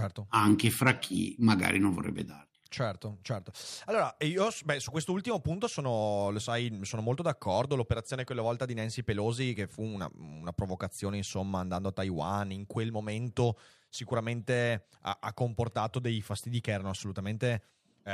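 A speech recording with no technical fault anywhere in the signal.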